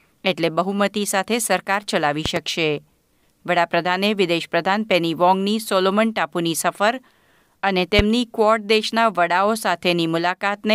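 At 2.26 s there's a loud pop, actually two in quick succession running to about 2.39 s, and another single one from 7.99 to 8.01 s. Each jumps well above the speech, something like 15 dB over it, while the talking carries on underneath. They sound like a sudden voltage step hitting the chain, likely a plug being nudged, a switch, or a bit of static, with the circuitry after it smearing it into a thump.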